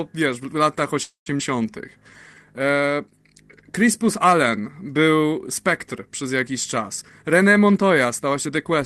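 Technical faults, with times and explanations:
1.03–1.29 s: call audio freeze. Just after "wiesz w latach" the last sound stretches into a fading buzz, then about 0.12 s of silence. The likely cause is delayed packets emptying the jitter buffer. The speech resumes where it stopped, with nothing lost.
1.38–1.42 s: skip ahead. Roughly 0.1 s of speech is dropped, and playback jumps forward with almost no gap.
1.56–2.46 s: jitter buffer slow-down. The speech runs at 87% speed with unchanged pitch and sounds drawn out. Repeated single pitch periods add 0.12 s to rebuild the buffer's reserve.
6.89–8.77 s: jitter buffer speed-up. The speech runs at 112% speed with unchanged pitch and sounds hurried. Short pitch-period pieces are cut out, roughly 0.2 s in total, to shrink the excess buffered delay.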